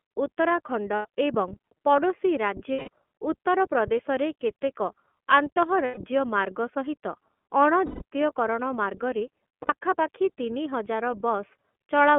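From start to finish the speech carries iLBC codec coloring: a narrowband line from about 200 Hz to 3.4 kHz, with a slightly rough, synthetic edge. On a spectrogram everything above 3.4 kHz is empty, and the damage is plainly audible, which suggests a 13.33 kbps, 30 ms-frame mode.

Lost iLBC frames interrupt the speech five times: 0.96–1.05 s (90 ms), 2.73–2.88 s (150 ms), 5.85–5.97 s (120 ms), 7.86–8.02 s (150 ms) and 9.63–9.74 s (60 ms). Each gap sounds like a held, buzzy-breathy vowel, because the decoder repeats the last pitch cycle mixed with noise. That fill shows as a flat, repeating waveform and steady horizontal harmonics, with clean recovery right after.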